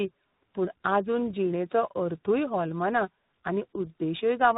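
Tandem speech coding runs through the whole clip: the speech has passed through two speech coders in succession, each re-encoding the already degraded output of the one before. The result is rougher and more warbly than a single codec would leave it, with a muffled, band-limited quality and nothing above 3.8 kHz. The combination of a low-rate frame-based coder followed by a delta-modulation stage fits an iLBC link feeding into CVSD.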